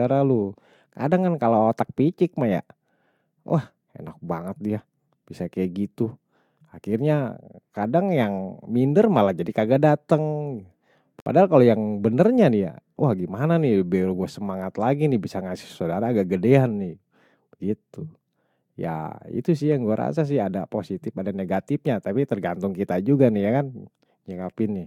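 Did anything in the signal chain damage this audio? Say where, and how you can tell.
Yes. The damage is at the codec stage, where separately encoded pieces were joined. At 11.20 s the speech drops into a gap of about 61 ms, ending at 11.26 s, then resumes exactly where it left off, with nothing missing. The edges are smeared by the codec. That is a gap at a join of encoded pieces: each piece kept its encoder start-up delay and last-frame padding, and the untrimmed silence sits between them.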